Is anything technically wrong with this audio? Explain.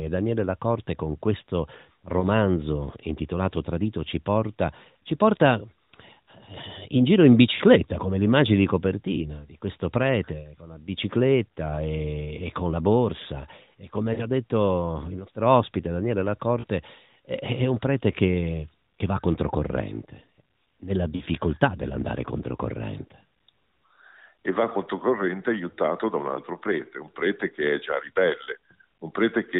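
Yes. The speech has five brief dropouts from lost AMR speech frames, heard within a narrowband mobile-codec sound that stops at 4 kHz.

The losses occur at 2.20 s after "con questo", at 7.54–7.62 s after "in giro in", and at 14.14–14.27 s, 16.60–16.66 s and 21.16–21.22 s after "che va controcorrente nella". Each is 20 to 60 ms long. The decoder repeats the last good pitch and vocal-tract settings at falling gain, so each one sounds like a short smeared warble or dip. On a waveform, each shows as a brief, shrinking envelope. On a spectrogram, the harmonics go flat and steady, then fade before normal speech returns.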